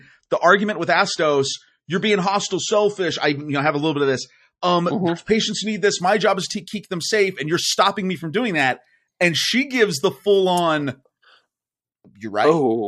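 Speech with an adaptive stream starting at a low bitrate. Until 6.0 s, nothing sounds above 8.3 kHz, suggesting 32 kbit/s MP3. Quality then jumps gaplessly.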